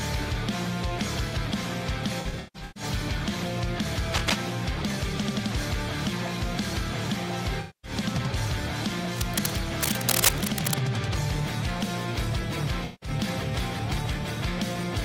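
From 2.20 to 2.83 s there is AAC frame loss with concealment. About 384 ms of audio goes missing, scattered across roughly 0.55 s, with the longest gap around 150 ms. The decoder fills each gap from the last good spectrum, leaving smeared, phasey patches.

From 4.14 to 4.35 s comes cable scratch noise: dense, uneven rustling bursts roughly as loud as the sound itself. This is likely a worn cable or connector being moved, with its contact resistance fluctuating.

The same frame loss returns from 7.60 to 7.91 s, with about 235 ms concealed and a similar noisy smear. Scratching recurs for longer, from 9.17 to 10.75 s. A final AAC dropout at 12.85 to 13.10 s conceals about 171 ms.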